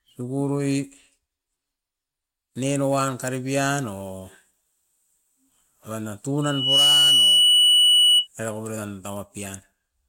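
Just after "oiran na", at 6.42 s, a piercing tone near 2.9 kHz swells within about 0.4 s to roughly 10 dB above the speech and howls until 8.28 s. This is loudspeaker feedback squeal: the microphone re-captured its own loudspeaker, and the loop gain at that frequency exceeded unity.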